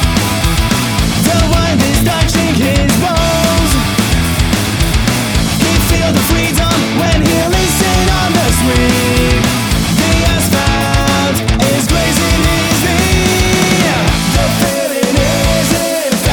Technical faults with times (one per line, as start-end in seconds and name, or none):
none